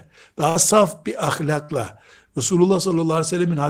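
Speech, with two bursts of packet loss, one at 0.49 to 0.58 s and one at 1.63 to 1.72 s. In each, a run of packets went missing or turned up too late, so the receiver kept extending the last bit of sound for about 56 ms and faded it down. You hear a short held buzz or fading hiss in place of the real audio. Then it picks up again with roughly 60 ms of the speech simply gone.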